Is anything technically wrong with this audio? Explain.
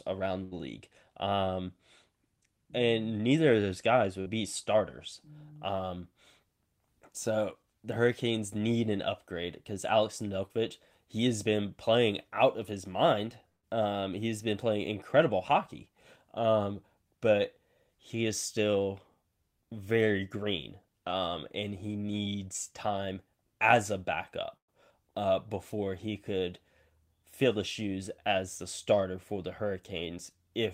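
Yes. The speech has three bursts of packet loss and one short concealed packet loss.

The bursts of packet loss occur at 0.43 to 0.54 s, 13.49 to 13.65 s and 24.57 to 24.70 s. In each, a run of audio around 80, 140 and 120 ms long never arrived in time. The receiver extended the last sound and let it decay, covering roughly 81, 141 and 110 ms. In the later two it fades to near silence for about 130 and 100 ms. Speech then resumes with the intervening stretch gone.

The short concealed packet loss sits at 4.22 to 4.30 s, between "neither of those guys" and "be starters". About 40 ms failed to reach the decoder, and roughly 42 ms of synthesized continuation was blended back into the real signal. Around 11 ms of material is effectively dropped. The result is a brief smear at the junction rather than an audible gap.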